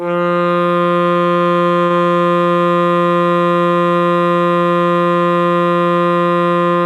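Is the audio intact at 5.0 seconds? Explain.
Yes, the music plays through cleanly at 5.0 seconds, with no dropout, click, distortion or other fault to be heard at that moment.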